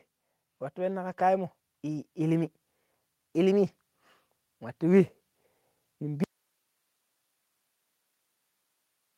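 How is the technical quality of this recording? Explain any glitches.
The recording has a handful of network glitches early on, a gentle level creep, and a hard dropout that takes out the last few seconds.

From 0.74 to about 2.5 s there's automatic gain rising. The gain control decided the input was too quiet and slowly turned itself up by about 3 dB. Because it's the whole input being lifted, the speech and the background noise swell together over nearly two seconds. It's a slow, smooth climb rather than a jump.

There are four spots of lost packet rebuilt from error correction, at 1.11, 1.19, 1.97 and 3.67 s, each covering one 20 ms packet. The original packet never arrived, but the next one carried a lower-bitrate backup copy, and the decoder played that instead. So nothing actually goes silent. You just get a brief patch where the speech turns rougher and a bit noisier before clean audio resumes.

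At 1.15 to 1.19 s there's a short concealed packet loss. About 20 ms of audio didn't turn up in time, and the receiver covered roughly 15 ms of it by stretching out the sound it had just played, then blending back into the real signal. It comes across as a tiny smear or wobble, tucked in right next to the rebuilt packets around 1.1 to 1.2 s.

From 6.24 s to the end there's an audio dropout to a faint residue. The speech cuts out abruptly mid-flow and never comes back. All that's left is hiss, around fifty decibels below the speech level. The chain after the break is clearly still running, since the noise floor carries on. The cause is likely a lost input signal upstream rather than anything in the encoding.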